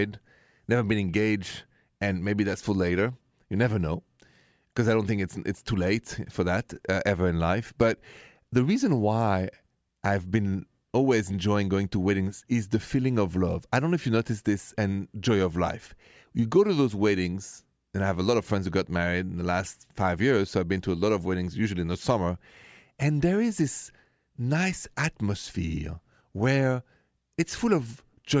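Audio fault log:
No audible faults detected.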